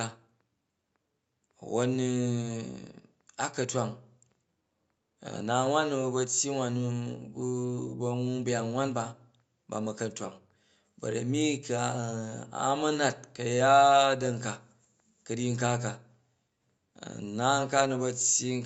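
No technical faults can be heard in this speech, which carries nothing above about 8 kHz, consistent with a call codec's wideband limit, along with the coding texture typical of such a link.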